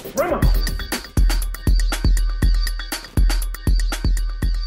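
An irregular burst of crackle and scratching cuts through the audio from 2.98 to 3.17 s: loose connector crackle, a worn contact chopping the signal as it makes and breaks.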